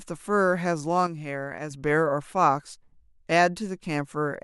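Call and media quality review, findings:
Sudden gain jump, 1.07 to 1.71 s. Speech and background noise drop together by about 6 dB, then step back up. The change is instant, from one sample to the next, with no ramp. Likely cause: a digital gain setting or one-bit shift applied mid-stream.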